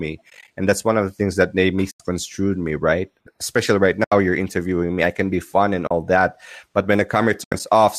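Around 0.30 to 0.48 s, just before "and that's one of", the speech drops out in soft-edged gaps totalling 100 ms, spread over 180 ms with no run much past 20 ms. That's AAC frame loss with muting: frames go missing, the decoder zeroes them, and the overlapping windows fade the sound out and back in. More holes follow at 1.91–2.00 s between "the things that they" and "me right", at 4.04–4.12 s, and at 5.87–5.91 s. The last, after "that but when" at 7.44–7.60 s, is 100 ms of gaps, the longest about 70 ms. The light roughness underneath is likely the low-delay AAC compression doing its job.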